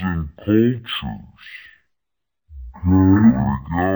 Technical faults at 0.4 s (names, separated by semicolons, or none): stereo read as mono